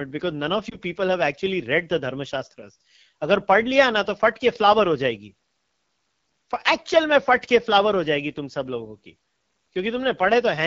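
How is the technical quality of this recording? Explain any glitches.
The technical quality is fair to poor. The whole recording is coloured by plainly audible codec damage, and there's one short dropout glitch near the start.

AMR wideband (HD Voice) codec, throughout: This is speech run through AMR-WB at one of its low rates, and the rough, raspy texture fits the 8.85 kbit/s mode. At that rate the codec has too few bits to model the voice's excitation pulses and vocal tract shape properly. It fills the band from 6.4 to 7 kHz with shaped noise. The coding damage is plainly audible the whole way through.

Lost AMR speech frames, 0.69 to 0.79 s: There's a brief dip or warble here. It sounds like a single lost frame, about 20 ms of missing audio. A radio error probably corrupted that frame, so it failed its checksum. The decoder then covered the gap by repeating the last good pitch and vocal tract settings at reduced gain. 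You hear that as a momentary smeared wobble, and the voice comes back a touch weak or rough just afterwards.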